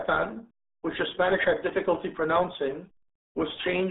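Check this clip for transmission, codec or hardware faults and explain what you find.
One codec fault runs through the whole speech clip. It sounds muffled and gargly from start to finish, with nothing above about 3.8 kHz and the band squeezed to roughly 200 Hz to 3.6 kHz. That is the RealAudio 14.4 codec, whose heavy damage fits an 8 kbit/s dial-up speech coder discarding most of the signal.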